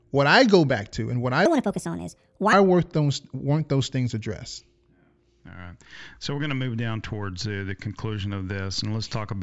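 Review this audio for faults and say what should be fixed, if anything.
Wrong sample rate from 1.46 to 2.53 s, after "to and what I": playback ran unconverted at 1.5 times speed, consistent with 16 kHz audio played at 24 kHz, raising speech about seven semitones. Match the output rate to the recorded rate or resample before playback.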